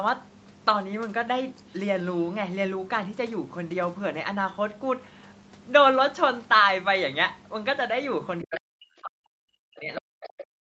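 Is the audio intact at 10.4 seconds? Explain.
No. At 10.4 s the talker's speech is pulled far down, in the deepest dips by roughly 40 dB, so it fades and breaks up. This is speech suppressed in double talk, running from 8.42 s to the end of the clip. Both sides were likely speaking at once, and the echo canceller, unable to separate the talker from the loudspeaker echo, attenuated everything it picked up, including the talker's own speech.

Over that same moment, from 10.23 s to 10.44 s, a second voice can be heard faintly, roughly 15 dB below the talker. This is the other side's voice leaking through. The talker's device was playing the far end on a loudspeaker, and the echo canceller likely failed to remove that sound from the microphone, so a brief, weak fragment of it remains in the signal.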